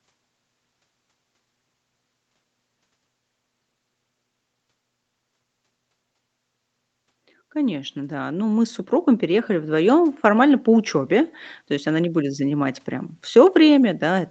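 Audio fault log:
7.53–9.99 s, automatic gain rising: the automatic gain control judged the input too quiet and raised its gain by about 8 dB over roughly two and a half seconds, so the speech and the background noise swell louder together.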